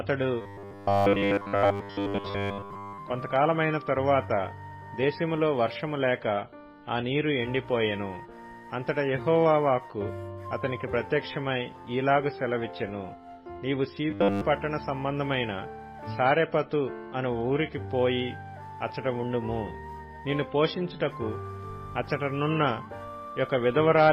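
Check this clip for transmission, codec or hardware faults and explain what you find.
There is one fault, robotic sound from repeated short buffers, at 0.41 to 2.99 s and again at 14.11 to 14.43 s. In both spans the sound becomes a rigid, metallic buzz pitched at 100 Hz. It still tracks the rough shape of the underlying sound. The likely cause is audio arriving too seldom, so playback loops the last fragment while the real audio is skipped. A 100 Hz buzz fits a 10 ms repeated buffer, with all of each span filled this way.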